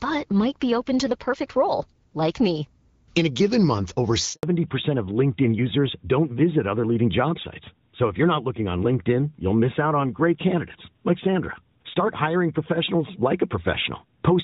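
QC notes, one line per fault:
4.33–4.43 s, handover gap: right after "a given month over" the sound dies away within a few tens of milliseconds and stays silent for 100 ms while the call switches networks and no frames arrive. Anything said in that span is lost. The waveform goes flat, and the spectrogram shows a blank vertical stripe.
4.43 s to end, fallback to narrowband: coming out of the gap, the call drops from HD Voice to a narrowband codec, which fits AMR-WB at 12.65 kbit/s giving way to AMR-NB. Nothing above 4 kHz survives, so the sound turns duller and rougher. The spectrogram shows a hard ceiling at 4 kHz from 4.43 s onward.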